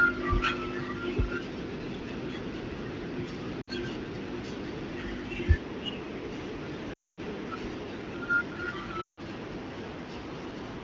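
Lost AMR speech frames break the speech three times: 3.61 to 3.70 s, 6.93 to 7.20 s and 9.01 to 9.20 s, lasting 60, 240 and 160 ms. Each time the decoder repeats its last good pitch and vocal tract settings at falling gain. The sound fades quickly, dropping to near silence within two frames each time before the speech returns rough. On a spectrogram, the harmonics freeze into flat horizontal streaks that thin out to blank, and the waveform envelope tapers away.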